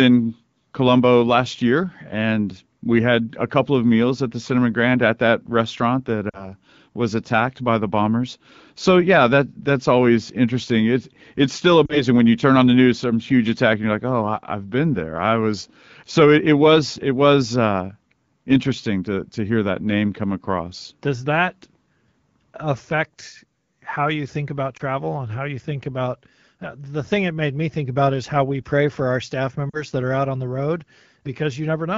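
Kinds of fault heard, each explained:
Lost AMR speech frames: brief dips and warbly, smeared patches in the speech at about 6.3 s after "at that restaurant that", 11.85 s after "it's still", 24.77 s, and 29.69 s after "pray for our staff". Each lasts 0.05 to 0.2 s before the voice returns. Radio errors corrupted short stretches of coded speech, fitting one or two 20 ms frames each, so the decoder repeated its last good pitch and vocal tract settings at falling gain to bridge the gap.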